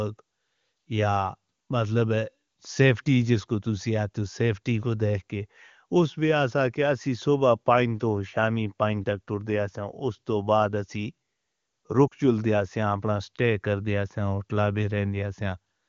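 At about 12.07 s there's a short stretch of lost AMR speech frames, running to roughly 12.14 s. It's about 40 ms, which fits two 20 ms frames failing their check. The wideband decoder papers over the gap by reusing the last good pitch and vocal tract settings at a falling level, so the speech briefly smears and sags. It then picks back up a little thin or rough, with the HD Voice bandwidth still there.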